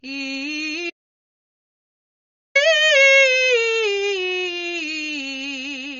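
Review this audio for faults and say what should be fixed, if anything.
The music has a hard ceiling at 6.9 kHz across the whole clip. Nothing sounds above it. The top end is dull, and sustained notes warble with a smeared, fizzy edge. This is likely AAC compression. The encoder quantises its frequency lines against a hearing model and throws away what it cannot afford. The damage is plainly audible and fits a low bitrate of around 24 kbps. Prevent it by encoding at a much higher bitrate.

From 0.90 s to 2.55 s the music drops out completely. That is about 1.65 s of total silence. No room tone or background remains in the gap. The music cuts off mid-flow and comes back mid-flow. This points to an audio dropout to silence. The input was likely lost, through a disconnected device, a failed link or a mute, while the recorder kept writing silence. Anything played during that span is gone. Prevent it by securing the input connection and monitoring levels during recording.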